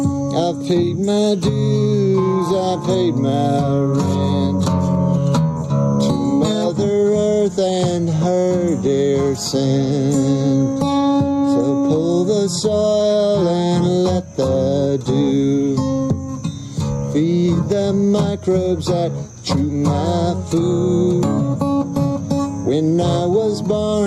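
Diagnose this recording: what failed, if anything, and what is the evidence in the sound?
The level breathes throughout the recording, a swing of around ten decibels, and loud and quiet passages sit squashed close together. This is gain pumping. The input gain was likely set far too high for the microphone, so a fast limiter or compressor in the processing chain clamps down on every peak and then releases.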